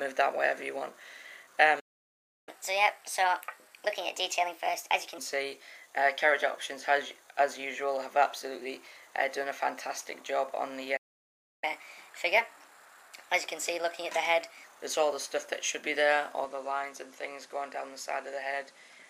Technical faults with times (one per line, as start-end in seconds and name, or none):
1.79-2.49 playback stall
2.49-5.18 catch-up at higher speed
10.96-11.64 playback stall
11.64-14.64 catch-up at higher speed
16.44-19.10 input switched to a poorer device